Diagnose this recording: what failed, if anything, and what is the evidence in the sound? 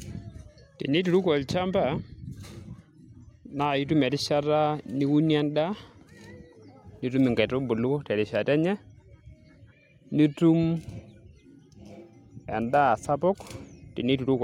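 Nothing in the recording points to a failure at any stage, from capture and conversion through transmission, storage and playback, so there is nothing to diagnose.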